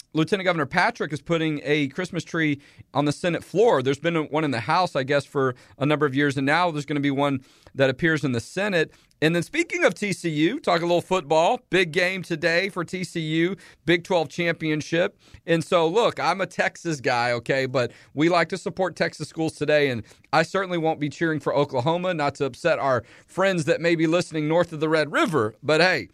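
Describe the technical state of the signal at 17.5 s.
At 17.5 s the speech signal is intact, with no audible technical fault at that moment.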